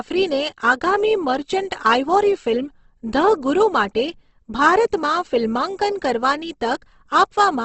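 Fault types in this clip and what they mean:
Opus compression: The speech sounds grainy and rough, with a noisy texture over voiced sounds and nothing above about 8.2 kHz. This is likely the Opus codec in its music (CELT) mode at a low rate, which fits around 16 kbps. It fills starved bands with folded or noise-like energy instead of leaving holes. On a spectrogram, energy stops at a flat ceiling near 8.2 kHz, and harmonics below look speckled and smeared.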